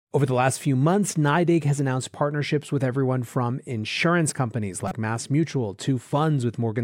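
At 4.88 to 4.92 s there's a short glitch in the speech, caused by damaged data in the compressed stream. Part of the data went bad, so the decoder misread those frames, lost sync and hunted for the next header, leaving a brief garbled blip.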